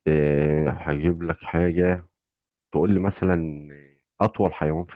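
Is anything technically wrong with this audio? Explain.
Yes. From 1.15 to 1.25 s there is a lost packet rebuilt from error correction. The span lasts about 100 ms, within which three separate packets, 60 ms of audio in all, went missing. The next packets carried low-bitrate copies of the lost audio, and the Opus decoder played those copies instead of leaving silence. So the speech does not drop out. Instead, this stretch sounds rougher and noisier than the audio around it, a short patch of coarser coding within the 12 kHz-wide call audio.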